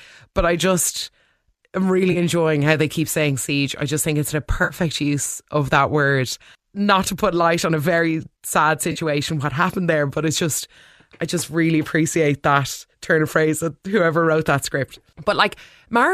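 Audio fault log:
2.12–2.17 s, 4.64–4.74 s, 8.92–8.99 s: AAC frame loss with concealment. Gaps of 30, 60 and 40 ms, consistent with runs of 10 ms frames, are filled from the last good spectrum. Each becomes a brief smeared, noisy patch in the speech, riding on the light coding damage that likely comes from low-delay AAC compression.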